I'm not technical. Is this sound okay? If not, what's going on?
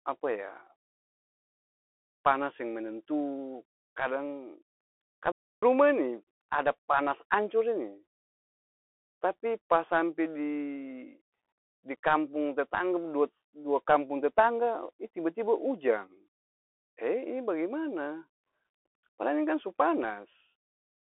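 No. The whole recording carries Bluetooth CVSD headset codec damage: the speech sounds thin and phone-like, s sounds turn scratchy, and a gritty hiss sits underneath. At 5.32 s there is a playback stall: the sound cuts out for about 0.31 s, likely because the player briefly ran out of data.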